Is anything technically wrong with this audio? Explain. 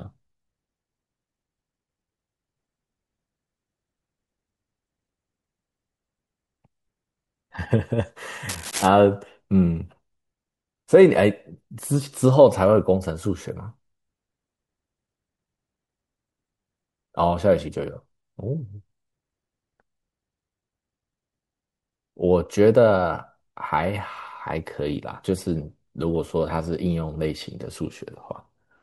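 Yes. From 8.49 to 8.89 s the speech is overlaid by cable scratch noise: a short patch of dense, irregular crackling and rustling, sitting around 10 dB below the speech, for roughly 0.4 s. The likely cause is a worn cable, connector or control being moved, so its contact resistance fluctuates rapidly and injects uneven bursts of noise into the signal path while the contact is disturbed.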